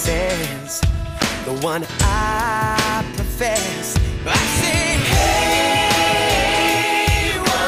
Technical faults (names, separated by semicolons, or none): block of digital silence